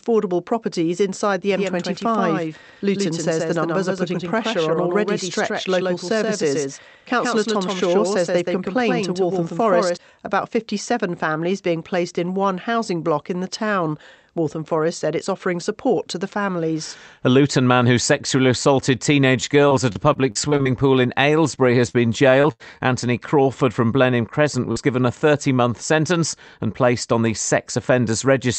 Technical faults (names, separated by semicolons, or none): doubled audio track; scattered short gaps; short concealed packet loss; lost packet rebuilt from error correction